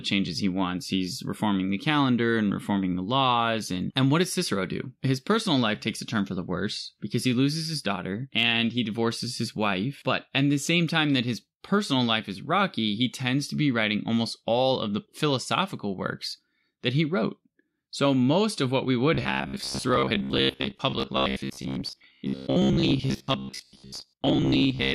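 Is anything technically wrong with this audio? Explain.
Yes, from 19.15 s to 24.94 s the speech turns into a stiff, metallic buzz pinned near 66.8 Hz. That's robotic sound from repeated short buffers, likely caused by audio arriving too slowly, so about half the time is filled by looping a roughly 15 ms chunk.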